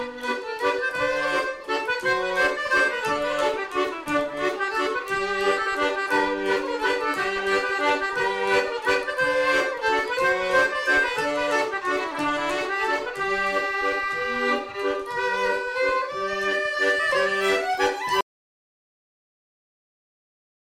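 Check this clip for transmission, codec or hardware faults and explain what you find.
One fault is present. An audio dropout to silence runs from 18.21 s to the end, about 2.5 s: the input was likely lost while recording continued, leaving silence, a flat waveform and a blank spectrogram with no room tone.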